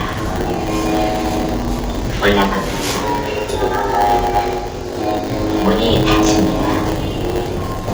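From the start, the treble is plainly damaged, and the high band sounds gritty and metallic rather than natural. The likely cause is HE-AAC compression at a low bitrate, fitting roughly 20 kbps, where spectral band replication rebuilds the treble from copied lower bands that do not align with the real harmonics.

Throughout, a steady 100 Hz buzz runs under the sound, and everything plays slower by a factor of 0.919 while keeping about its normal pitch. This is a block size mismatch (padded): one stage delivers shorter blocks than the next stage reads, so a short stretch of zeros fills out each block.

From 6.11 s to the end of the clip, a video or display buzz appears at 75 Hz, roughly 20 dB below the sound, with hash above it. A screen or its video cable is coupling interference at its field rate into the audio path.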